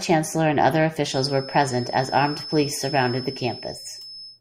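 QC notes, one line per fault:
1.01–4.40 s: feedback whistle. From 1.01 s to the end of the clip a thin, steady tone at 5.2 kHz sits behind the speech, roughly 15 dB below it and swelling and fading slowly in level. This is likely a loudspeaker-to-microphone loop held just at the edge of feedback, so one frequency rings on without building up. Unlike runaway howl it never builds into a howl, and unlike a mains hum or steady electrical tone it sits high and drifts in level.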